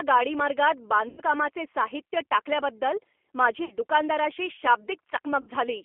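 Throughout, the speech sounds slightly rough, grainy and synthetic, confined to a narrow telephone band from about 300 Hz to 3.4 kHz with nothing above. This is the G.729 codec damage, plainly audible here. The decoder rebuilds each 10 ms frame from a vocal tract filter, a pitch predictor and a sparse set of pulses rather than the actual waveform, so fine texture is lost. The sound fits the G.729A variant at 8 kbit/s.

At 1.09 to 1.21 s the speech smears into a stretched buzzy tone or coloured noise that fades, then comes back weak. Similar smears follow at 3.65 to 3.77 s and at 5.41 to 5.50 s. These are VoIP packet loss concealed by the speech codec. About 90 ms of audio went missing in the first gap, which fits three lost packets, and about 60 ms in each of the other two, which fits two. The decoder filled each hole by repeating its last pitch and filter with falling gain. Because every frame builds on the one before, the speech stays weakened for a short while after real packets resume.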